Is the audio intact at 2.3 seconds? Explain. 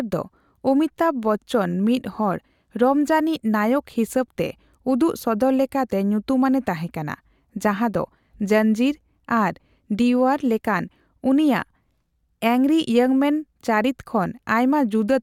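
Yes, the audio is intact at 2.3 seconds, with no dropout, click, distortion or other fault at that moment.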